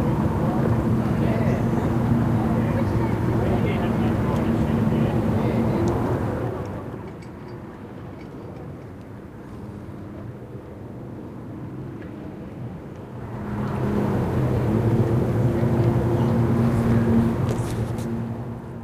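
From 6.08 to 7.18 s, zipper noise: a roughly 15 dB drop in unsmoothed 2 dB steps ticks about seven times a second, drawing a staircase waveform and thin vertical spectrogram lines.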